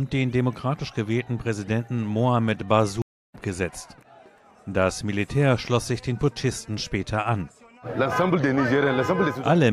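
The audio has a stream reconnect at 3.02 to 3.35 s: about 0.3 s of silence, then a fresh decoder resumes roughly 0.3 s later in the material.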